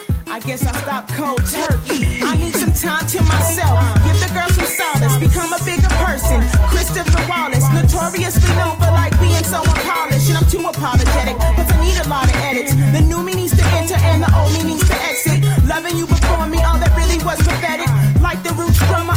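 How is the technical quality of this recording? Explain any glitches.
No glitches turn up anywhere in the recording, with no dropouts, clicks or timing faults to explain.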